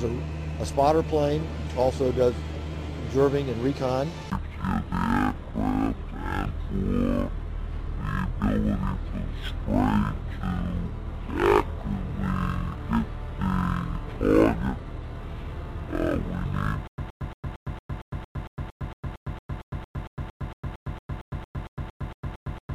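At 16.87 s the audio falls into a stutter with silent gaps that lasts to the end: a 121 ms fragment repeats 25 times, each followed by about 107 ms of dead digital silence, giving a steady 228 ms cycle. This is likely a stalled player or stream replaying its last buffer on each retry. Unlike a plain dropout, the same burst keeps returning, and the even rhythm and true silence set it apart from a seamless loop.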